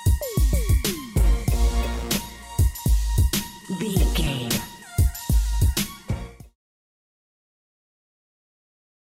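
Compressed frames are skipped at 2.78 s and again at 4.26 s. At each point whole blocks of the encoded stream never reach the output, so the sound jumps forward instead of continuing. The first jump loses roughly 40 ms, the second about a tenth of a second, which points to around four and ten missing 10 ms frames. Both jumps come before the smooth fade-out that ends near 6.56 s.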